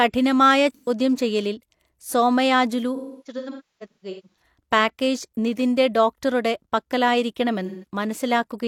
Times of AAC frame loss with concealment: 0.70-0.89, 2.95-4.41, 7.65-7.85

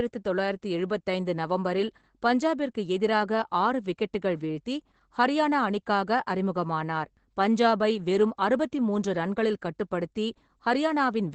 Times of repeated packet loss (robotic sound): none

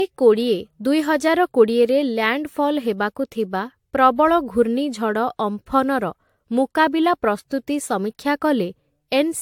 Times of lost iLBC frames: none

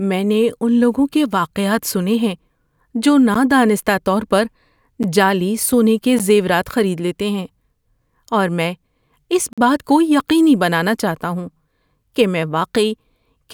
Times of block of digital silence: 3.34, 5.03, 6.19, 9.53-9.58

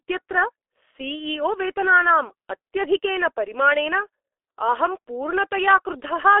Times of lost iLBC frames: none

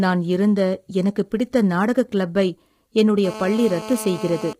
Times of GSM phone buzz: 3.25-4.53

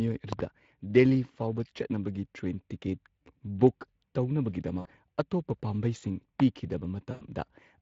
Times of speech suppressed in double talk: none

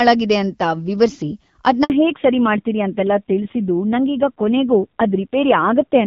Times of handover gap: 1.84-1.90

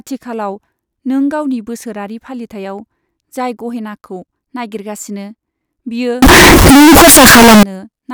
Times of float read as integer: 6.22-7.63

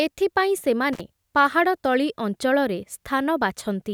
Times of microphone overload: none

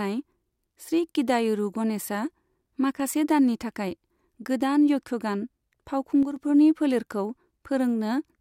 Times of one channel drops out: 2.91-3.00, 6.23-6.36

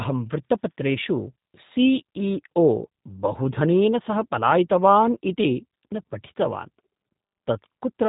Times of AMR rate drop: none

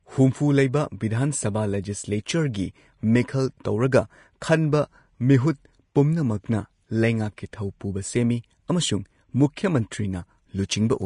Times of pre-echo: 4.41

